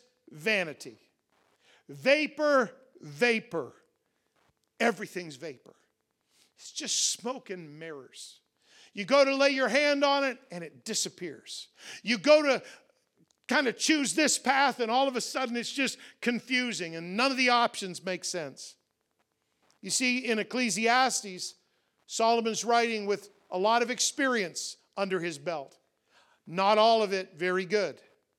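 A faint, steady ticking runs under the speech from start to finish, about ten ticks a second and well below it in level. That is Wi-Fi interference: a nearby radio's beacon every 102.4 ms is rectified by the audio circuit.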